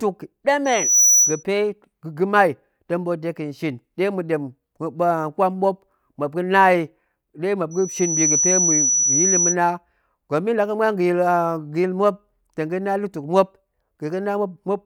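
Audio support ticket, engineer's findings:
Loudspeaker feedback squeal, speech clip. Pure tone near 5.9 kHz, 0.65–1.43 s and 7.71–9.56 s. Each swells over roughly 0.4 and 0.5 s respectively to about 5 dB above the speech. Mic picking up its own loudspeaker; loop gain exceeds unity at 5.9 kHz, so that frequency regenerates until the loop breaks. Check mic-to-speaker placement and gain; notch or reduce the monitor feed around 5.9 kHz.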